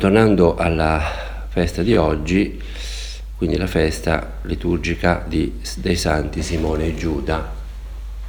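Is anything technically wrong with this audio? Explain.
Yes. Brief stutters, heard as clicks, land at 1.94, 4.46 and 6.98 seconds, about every 2.5 seconds. These are overlapping chunks: the audio was handled in 2.5-second blocks, each starting slightly early, so a 20 ms slice plays twice at every join.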